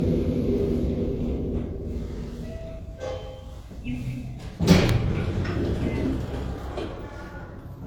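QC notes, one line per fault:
throughout, low-bitrate audio saved at a high bitrate: smeared, watery detail. This points to a low-rate HE-AAC source (around 40 kbit/s) likely re-encoded as high-rate MP3.
4.89 s, electrical switching spike: a single sharp snap sits on top of the sound, likely a nearby switch or static discharge arcing into the audio line.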